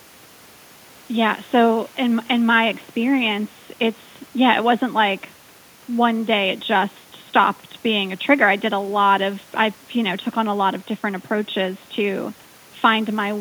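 No technical faults can be heard in this speech recording; the only other sound is the room's own background noise, which sits about 35 dB below the speech.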